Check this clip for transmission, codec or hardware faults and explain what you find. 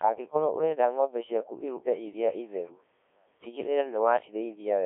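A very low-rate Codec 2 vocoder sits in the transmission path for the whole clip. Rather than carrying the waveform, the link sends only pitch, voicing, energy and a coarse spectral envelope, and the decoder rebuilds the speech from sine waves. The damage is heavy, which fits a rate of about 1.3 kbit/s. The speech comes out robotic and buzzy, squeezed into a 250 Hz to 3.5 kHz band with nothing above 3.6 kHz.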